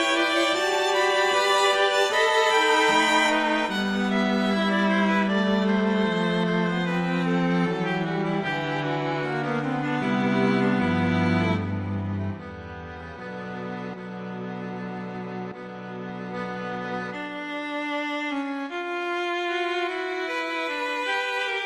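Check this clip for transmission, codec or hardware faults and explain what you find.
Nothing stood out on listening that would point to a problem in how this audio was carried, encoded or captured.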